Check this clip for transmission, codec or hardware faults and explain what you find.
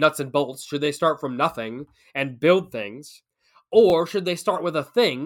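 Two repeated buffer faults occur. Between 0.86 and 0.88 s, after "and bolts should they" and before "start from nothing and", and again at 3.90 to 3.92 s, one 20 ms chunk plays twice. Fresh audio arrived late, so the previous buffer was replayed, producing a brief stutter-click. Unlike a dropout, no silence or lost audio occurs.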